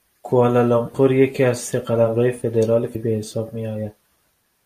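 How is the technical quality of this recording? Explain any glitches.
One glitch stands out. From 2.92 to 2.96 s, damaged data in the compressed stream causes the decoder to lose frame sync and hunt for the next header, producing a brief glitch.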